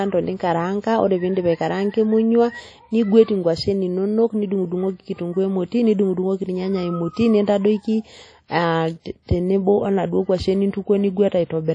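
Across the entire speech, plainly audible WMA compression damage is present, likely from a low-bitrate encode near 32 kbps. Nothing reaches above 10.1 kHz, and long transform blocks smear quantisation noise over tens of milliseconds, leaving a ringing, washy hiss that breathes with the signal.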